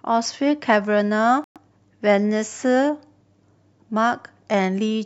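Speech, with a sudden hole from 1.44 to 1.58 s: the sound cuts off abruptly into about 0.14 s of silence, then resumes on time. This is a corrupt frame muted fault. Bit errors damaged a short run of compressed frames, the decoder rejected them, and the player substituted silence of the same length.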